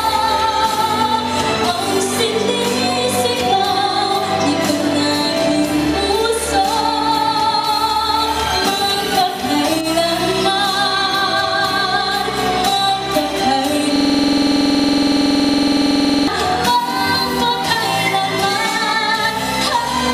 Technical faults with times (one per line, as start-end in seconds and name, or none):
13.96-16.27 system hang loop